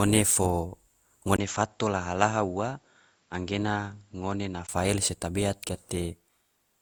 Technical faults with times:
0.00-6.82 generation loss
0.50 electrical switching spike
1.36-4.69 input switched to a poorer device

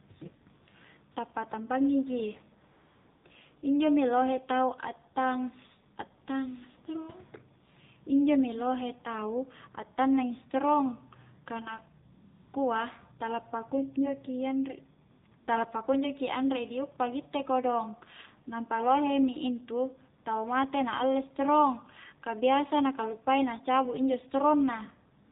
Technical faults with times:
0.00-25.31 AMR narrowband mobile codec
0.66-0.68 AMR comfort noise
1.12-1.16 AMR comfort noise
2.72-3.24 AMR comfort noise
12.14-12.54 AMR comfort noise
15.12-15.48 AMR comfort noise
25.26-25.31 AMR comfort noise

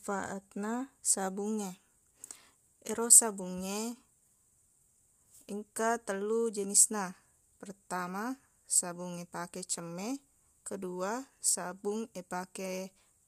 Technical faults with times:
0.00-13.28 low-delay AAC compression

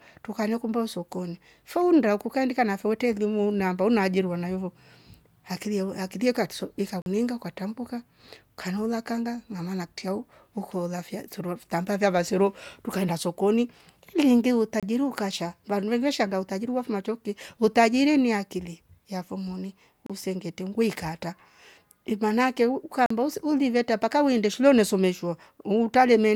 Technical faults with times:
7.02-7.06 block of digital silence
14.80-14.83 block of digital silence
20.06-20.10 block of digital silence
23.06-23.10 block of digital silence

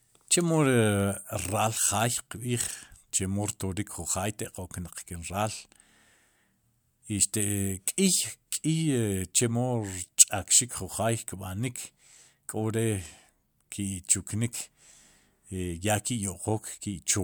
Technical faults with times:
none

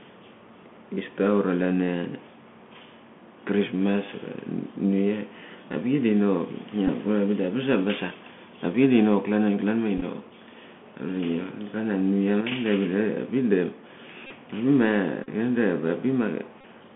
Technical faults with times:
0.00-16.95 Bluetooth CVSD headset codec
6.87-6.90 Bluetooth headset packet repeated
9.98-10.03 Bluetooth headset packet repeated
14.27-14.32 Bluetooth headset packet repeated
15.24-15.29 Bluetooth headset packet repeated
16.61-16.64 Bluetooth headset packet repeated

